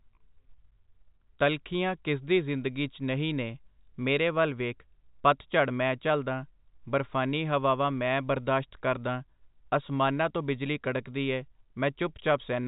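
Speech, with no technical fault to report. It has come through a WebRTC call path, and nothing reaches above 4 kHz, which points to a narrowband telephone codec such as G.711 mu-law at 64 kbps.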